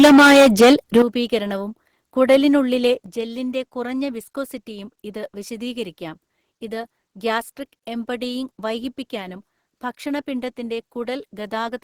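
Microphone overload runs from 0 to 1.02 s of this speech clip: the loudest syllables sound harsh and crackly, with close to a third of the waveform flattened at its peaks, likely because the input level was set about 12 dB beyond what the converter could take. Microphone volume stepped down at 1.02 s and again at 3.06 s, where voice and background drop abruptly by about 11 dB and then about 7 dB, the first straight after the distorted opening, likely the call software cutting the device's input gain on detecting clipping.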